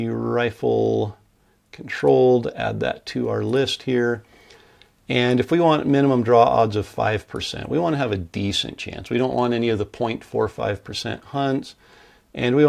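Nothing in the clip stood out as a technical problem on listening.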